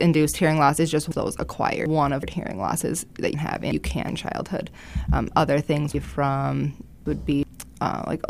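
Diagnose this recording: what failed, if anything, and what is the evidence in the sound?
Chunks out of order in the buffer stage: jumbled stretches at 1.11–2.23 s, 3.34–4.09 s and 5.94–7.43 s, where 372 ms blocks play one to three blocks late.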